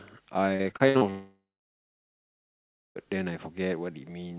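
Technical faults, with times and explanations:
0.56–1.04 s, repeated packet loss (robotic sound): The audio breaks up into choppy fragments. Six short holes open in under half a second, the longest about 62 ms. Each one is patched by stretching the last bit of sound, and the next hole arrives soon after. Nearly half of this span, about 210 ms, is filler rather than real audio. That constant repeating is what gives it the robotic edge. The band stops at 4 kHz, which fits a G.711 call codec.
1.10–2.98 s, long network dropout: The sound stalls for almost two seconds. First a brief, fading fill continues the last sound. Then about 1.55 s of silence follows. When audio resumes near 2.98 s, it picks up further along, and roughly 1.86 s of material never plays. The likely cause is that no audio reached the receiver for this whole stretch. The concealment could only extend the last sound briefly before giving way to silence.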